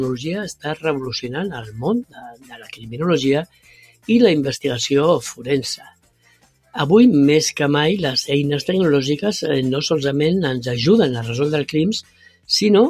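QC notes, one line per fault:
Throughout: noise suppressor applied to music or sounds. A speech-oriented suppressor is treating steady tones, ambience and reverb as noise, so its gain keeps moving, with the loss swinging by about 15 dB. Transients pass largely intact while sustained material and decays are pulled down, which gives the audio an audible pumping and fluttering quality and a thinner body than the source should have, as if the room around it keeps being switched off.
0.54–0.84 s, 1.57–1.79 s, 2.04–2.95 s, 3.45–4.09 s, 5.77–6.75 s, 12.02–12.49 s: sound cut by the noise suppressor. At each of these points the suppressor classifies the held portion of the sound as noise and clamps it harder than the surrounding material. Drops reach about 20 to 21 dB in most places and about 9 dB at 1.57 s. Sustained content sinks and tails are truncated, while the onsets survive, so the sound seems to collapse just after it starts.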